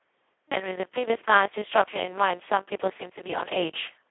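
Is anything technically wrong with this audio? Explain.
Yes. Throughout, it's heavy Speex codec damage: CELP coding starved of excitation bits, which fits roughly 2 kbps, so speech turns hoarse and robotic, squeezed into 300 Hz to 3.4 kHz, nothing above 3.8 kHz.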